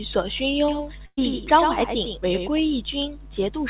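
Speech, passed through a G.711 mu-law call path with nothing above 4 kHz. From 0.68 s to 2.60 s, just after "索勋", a doubled audio track appears: a second copy trails roughly 100 ms behind, about 5 dB quieter, with no decay, likely from a second, slower capture path. At 1.06 to 1.19 s, a burst of packet loss removes about 120 ms. The receiver stretches the last sound, fading it to silence, then resumes further on.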